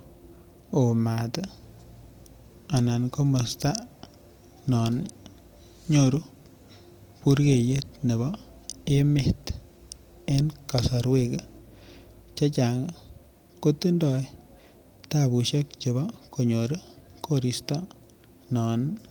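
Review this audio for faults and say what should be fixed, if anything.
No faults were heard; nothing needs fixing.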